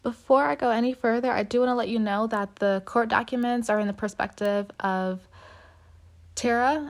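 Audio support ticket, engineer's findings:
Two isolated ticks in the speech at 3.43 s and 4.46 s. Classic bit error spike: a single sample each, one bit flipped somewhere in memory or on the digital link, so the value jumps by a power of two and snaps straight back. Peaks reach about -22 dBFS and about -16 dBFS, the second louder. Broadband click, no relation to the signal underneath. Worth checking the link and buffer memory for flaky bits.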